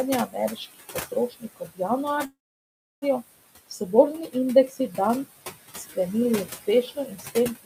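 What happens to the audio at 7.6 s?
The noise suppressor has mistaken the tail of the speech for background noise. This speech cut by the noise suppressor runs from 6.46 s to the end at 7.66 s, so 7.6 s falls inside it. The suppressor turns the speech down along with the room noise, by as much as about 22 dB at the deepest point. The closing syllables therefore sound swallowed and faint, with their quieter consonants and endings pulled down toward silence.

That moment also carries the noise suppressor artifacts present through the whole clip. The suppressor works frame by frame, lowering each frequency band it judges to be steady noise by about 18 dB. Because its decisions shift from frame to frame, the residue of the room noise, which sits about 12 dB below the speech, sinks between the words and rises under them rather than staying even.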